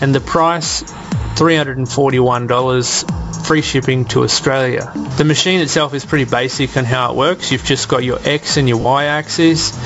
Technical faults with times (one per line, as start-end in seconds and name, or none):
0.00-9.86 gain pumping
8.81-8.85 lost LE Audio frames